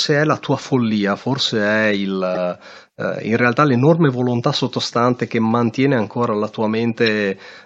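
At 2.35 to 2.37 s, right after "tua follia forse è", a corrupt frame decoded produces a sharp, loud blip of about a couple of frames' length, peaking near -10 dBFS. Flipped bits in the compressed data left the decoder with wrong gains or misread codes, so it placed energy at the wrong frequencies. A second, single-frame chirp follows at 7.06 s, after "mantiene ancora la tua", quieter at around -20 dBFS.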